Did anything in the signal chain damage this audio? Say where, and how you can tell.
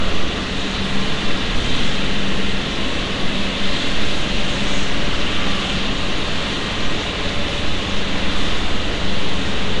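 Yes: the codec stage. Throughout, the audio carries a rough hissy halo and smeared, underwater blur, with nothing above 10.6 kHz, likely Nellymoser compression near 44 kbps.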